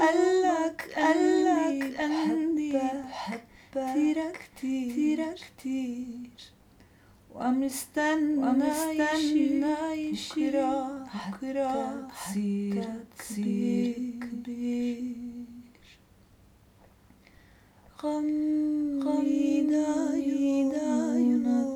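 A doubled audio track runs through the whole clip: every sound is heard a second time about one second later, at roughly the same loudness as the first. The repeat covers the full frequency range and carries no decay or added room colour, so it reads as a hard, identical copy rather than an echo. This likely comes from the same signal being captured again over a slower path, or from two copies held out of step in an edit.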